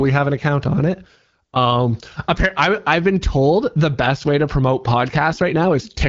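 Listening through this speech recording, nothing stood out as a technical problem.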